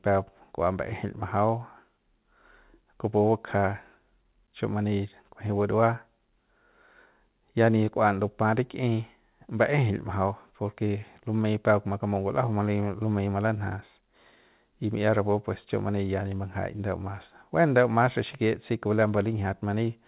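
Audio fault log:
No faults are heard anywhere in this speech clip. The call path carries it through the G.711 mu-law codec at 64 kbps, so the audio holds nothing above 4 kHz and has the usual coding noise that codec brings.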